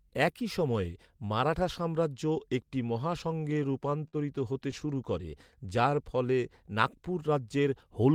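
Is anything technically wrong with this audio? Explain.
Yes, there are two kinds of trouble in this speech. From 3.31 to 4.16 s there are repeated stalls (stutter): ten small gaps, the longest 50 ms, and again from 4.53 to 4.95 s with four gaps of up to 15 ms. Packets were arriving late, so the jitter buffer kept running dry and the receiver stretched the last sound to cover each wait. Nothing is lost, but the speech hitches and drags.

Then from 5.63 to 6.36 s there's a jitter buffer slow-down. The receiver rebuilt its reserve by repeating single pitch periods, adding 85 ms and running the speech at 89% speed. The pitch stays the same, but the sounds come out drawn out and sluggish.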